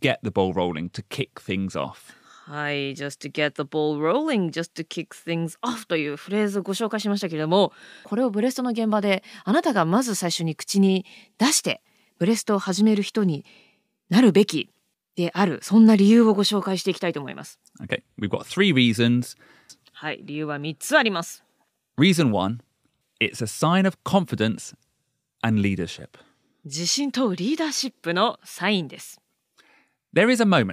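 At 24.63 s the speech carries a single sharp click, a brief tick that sits on top of the sound rather than interrupting it, and shows as a thin vertical line across the whole spectrum. This is most likely dropped samples: around one sample missing from the stream, so the waveform steps abruptly from one value to a later one. The gap is far too short to remove any audible sound.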